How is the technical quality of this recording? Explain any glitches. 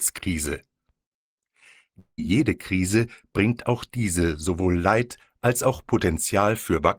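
The recording has one glitch. From 1.99 to 2.20 s the speech breaks off, likely from a long network dropout. Audio stopped arriving. The receiver extended the last sound as a fading buzz, then about 70 ms of silence. Speech resumes with 180 ms missing.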